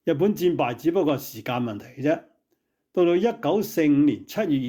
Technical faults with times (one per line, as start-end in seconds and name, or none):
none